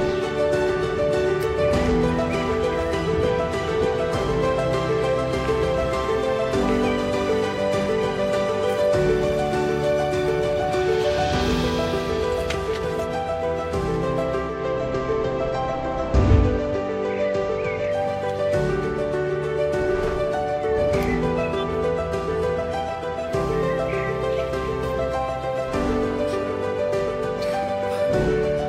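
At 14.44 s the audio blends from digital radio to analogue. The receiver lost its digital signal and cross-faded over about 183 ms to the station's FM broadcast. The level drops by about 1 dB. A faint hiss comes up, roughly 40 dB below the signal. At 18.03 s the digital signal returns, and the audio blends back, removing the hiss.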